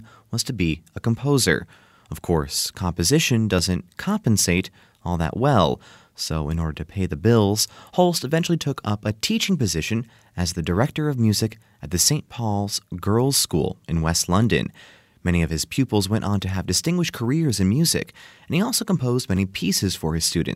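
From 0.44 s to 19.37 s, a brief click recurs every 3.15 s, about seven in all, over the speech. This pattern is likely clock drift buffer slips: a few-hundred-ppm mismatch between two device clocks forces a few dozen samples to be dropped or repeated at each slip.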